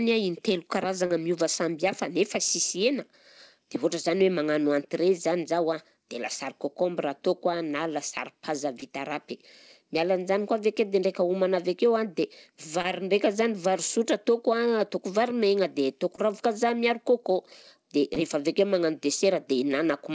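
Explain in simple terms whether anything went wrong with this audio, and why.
Yes, short concealed packet loss: tiny gaps at 1.06, 4.18, 8.80, 12.82, 16.16 and 18.14 s got patched by stretching the preceding sound, so you hear quick smears, like just before "miova samby hafa nefa".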